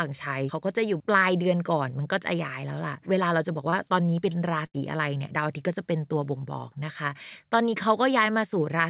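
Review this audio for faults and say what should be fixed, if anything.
Short concealed packet loss at 3.70 to 3.74 s: about 20 ms never arrived, so the receiver extended the preceding sound and blended back. It leaves a brief smear, not a fading tail or a skip.

A burst of packet loss at 4.66 to 4.76 s lost about 80 ms. The last sound was stretched and faded for roughly 75 ms, then speech resumed further on with that stretch gone. The audible decay and jump set it apart from the brief smear at 3.70 s.

Both fit a call path whose narrowband sound, with nothing above 4 kHz, points to G.711 mu-law. A deeper jitter buffer, or forward error correction or redundant packets on the link, would prevent these losses.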